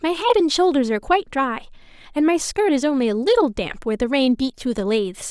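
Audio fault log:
No faults are heard anywhere in the speech. Nothing in the audio calls for an entry in this log.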